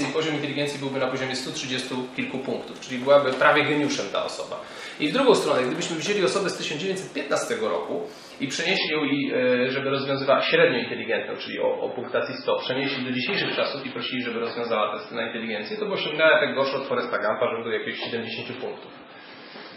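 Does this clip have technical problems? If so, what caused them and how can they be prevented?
Yes. From 8.77 s to the end, the sound abruptly turns dull and smeared, with nothing above 5.5 kHz and a swirly, watery coarseness that wasn't there before. There is no gap at the switch. This is an adaptive stream at a lower bitrate: when the connection slowed, the player switched to a much leaner encoding, which fits a drop from MP3 at about 128 kbit/s to roughly 16 kbit/s, and it never switched back up. A larger playback buffer and a higher minimum bitrate in the adaptive ladder would prevent this.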